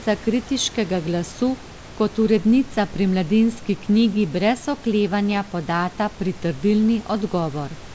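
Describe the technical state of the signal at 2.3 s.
At 2.3 s the audio is intact: the speech comes through cleanly over the call path, with band-limited wideband coding that leaves nothing above 8 kHz, and the room's background noise sits well beneath it.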